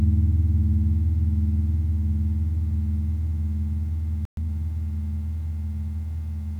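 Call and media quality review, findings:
Playback stall, 4.25 to 4.37 s: audio cuts to silence mid-flow for 120 ms, then resumes. Likely player buffer underrun or blocked audio thread. Unlike a network dropout with concealment, the gap is clean silence rather than smeared or repeated fill.

Time-compressed catch-up, 4.37 to 4.49 s: directly after the gap, audio runs hurried at 2x for 120 ms. Player jitter buffer draining its backlog by cutting and cross-fading short segments. Pitch stays normal, unlike a sample-rate mismatch, where the pitch would rise along with the speed.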